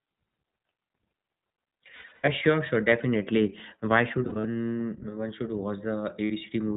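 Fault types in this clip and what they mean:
iLBC codec: A narrowband VoIP codec that codes each short frame on its own and cuts everything above 4 kHz. The speech sounds dull, plainly rough and a bit synthetic throughout, which fits the 15.2 kbps mode with its 20 ms frames.
Lost iLBC frames: Dropped packets that the decoder covers by repeating the last pitch cycle with some noise. You hear brief buzzy, held-vowel patches at 1.96 to 2.29 s, 4.24 to 4.46 s and 6.24 to 6.32 s, with the normal voice returning right after each one.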